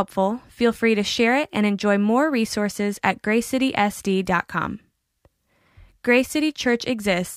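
No technical faults can be heard anywhere in this recording of speech. Nothing in the audio stands out as needing a timestamp or a closer listen.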